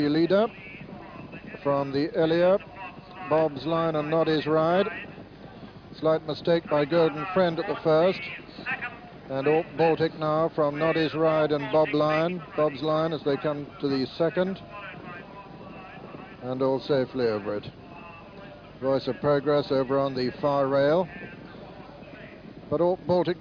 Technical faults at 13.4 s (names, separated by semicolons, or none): none